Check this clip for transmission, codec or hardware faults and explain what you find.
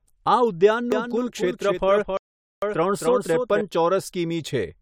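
Two faults turn up in this speech clip: a doubled audio track and a rebuffering stall.

From 0.92 s to 3.61 s there's a doubled audio track. A second, full-band copy of the speech runs roughly 300 ms behind the original and about 5 dB quieter. Because that copy has no decay or room colour, it sounds like a clean, hard echo rather than reverb, and it cuts in and out abruptly at both ends. The likely cause is the same signal being captured a second time through a slower path and mixed back in.

Between 2.17 s and 2.62 s there's a rebuffering stall. The player ran dry of downloaded audio, so everything drops to dead silence for about 0.45 s and then picks up exactly where it stopped. Nothing is skipped, but that gap stretches the clip's timing. Since it sits inside the doubled stretch, the stall silences both the original and the delayed copy together.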